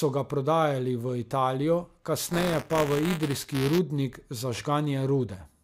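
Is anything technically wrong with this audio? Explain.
Yes, there is buffer tearing from 2.25 to 3.79 s. Writer and reader slipped, so a small slice of each 5 ms period replays speech from roughly 20 ms earlier, causing a 200 Hz robotic buzz. Spectrograms show vertical stripes every 5 ms; waveforms show hard steps.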